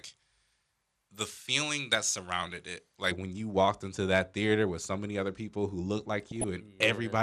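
From 0.00 to 3.11 s, pre-emphasis is left on. The treble sits about 11 dB high at 10 kHz, so the speech sounds thin, bright and sibilant.

Throughout, the sound is dull and gurgling with granular grit. That points to MP2 compression, likely at a low rate near 80 kbps, with upper sub-bands starved of bits.

From 6.27 to 6.44 s, DAB burbling breaks through. Bit errors slip past error correction and put wrong samples into single sub-bands. It sounds like short blips of noise.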